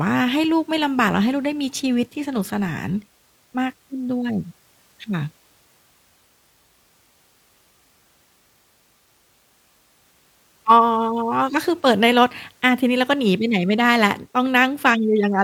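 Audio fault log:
No faults detected in recording.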